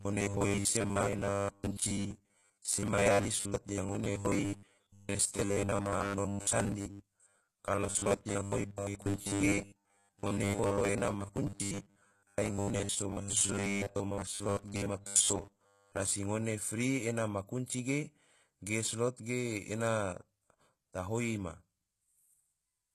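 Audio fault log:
throughout: HE-AAC compression. The codec damage is plainly audible, and the top end stops dead at 12.4 kHz. This sounds like HE-AAC at a low rate, which fits something around 16 kbps. Only the lower spectrum gets coded properly. Everything above is likely rebuilt by spectral band replication, which copies lower bands upward and shapes them with a coarse envelope. That treble isn't the real thing, so harmonics don't line up across the crossover.
0.01 to 16.11 s: robotic sound from repeated short buffers. Throughout the first sixteen seconds the speech turns into a rigid buzz at 100 Hz. That rate points to a 10 ms chunk being replayed because fresh audio likely isn't arriving in time. Roughly two thirds or more of that stretch is repeats rather than real audio. The skipped material means the speech only loosely follows its original shape.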